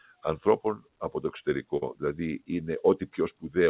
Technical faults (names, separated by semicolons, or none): noise suppressor applied to music or sounds; sound cut by the noise suppressor; burst of packet loss